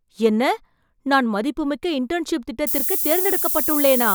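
A speech clip in which, from 2.67 s to the end at 4.14 s, a thin, steady hiss climbs sharply toward the top of the band, roughly as loud as the speech itself. This is low bit depth with noise shaping: only 4 bits remain, and the rounding error is pushed upward in frequency.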